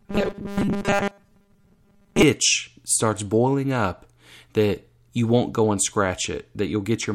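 From 0.01 s to 2.23 s the speech has a robotic sound from repeated short buffers: a rigid metallic buzz at 200 Hz, likely from 5 ms buffers looped when audio arrived too seldom, covering most of that stretch. A spectrogram shows evenly spaced 200 Hz harmonic lines; the waveform shows identical repeating cycles.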